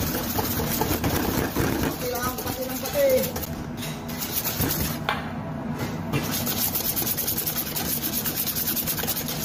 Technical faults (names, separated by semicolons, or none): gap between stream segments